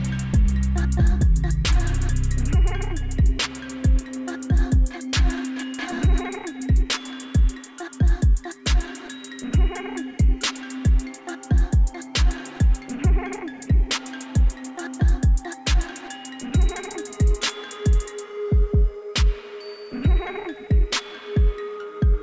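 Nothing stood out on listening.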